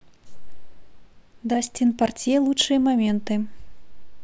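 At 3.10 s the speech carries a DC step: the waveform's zero line jumps by about -31 dBFS and holds there to the end. The onset is heard as a single low thump, while the speech itself continues unaffected.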